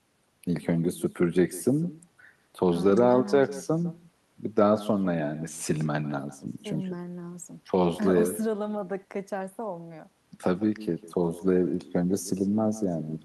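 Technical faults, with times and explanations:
Throughout, echo with no canceller: the far end's loudspeaker feeds its microphone, returning the speech about 18 dB quieter, roughly 150 ms late, and thinner.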